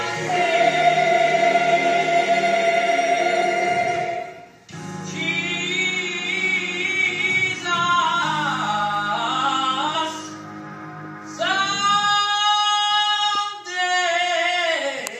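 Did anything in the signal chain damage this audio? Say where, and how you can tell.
Yes. Compressed frames were skipped at the codec or storage stage, with whole 21.3 ms frames dropped. At 3.41 s and 8.21 s the sound jumps ahead roughly a tenth of a second, and at 9.94 s a few tens of milliseconds.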